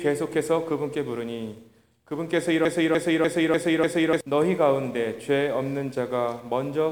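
From 2.65 to 4.21 s a broken-record loop repeats one 0.3 s fragment five times, exactly and back to back, likely because the player or stream stalled on its last buffer. Unlike echo or stutter, the copies are identical, and the audio they replace is lost.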